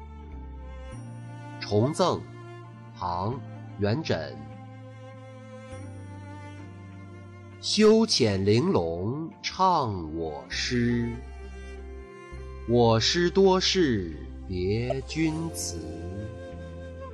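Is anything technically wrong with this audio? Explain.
Yes. At 14.90 to 14.92 s there is a corrupt frame decoded: a single compressed frame arrived with flipped bits and the decoder played it anyway. Misread gains and codes placed energy at wrong frequencies, giving a brief chirp, squeak, blip or burst of noise peaking around -15 dBFS.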